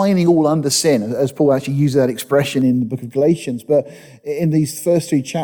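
From 2.62 s to the end, one channel runs late by a fraction of a millisecond before the two are summed to mono, causing channel delay (comb filtering). Shared content cancels at evenly spaced frequencies, starting near 1.5 kHz, leaving the sound hollow and phasey.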